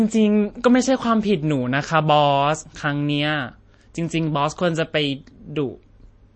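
Speech with MP3 compression throughout: the treble stops dead at 8.3 kHz, and weak detail flickers in and out, giving a plainly audible watery, swirly quality, likely from a low-bitrate encode that fits 32 kbps. A spectrogram would show a flat ceiling at 8.3 kHz with patchy, blinking gaps below it.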